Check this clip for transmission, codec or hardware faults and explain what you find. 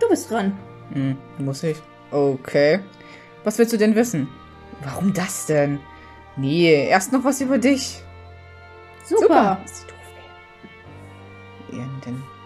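Nothing in the clip points to a transmission, codec or hardware fault. No dropouts, glitches or other disturbances are audible anywhere in it.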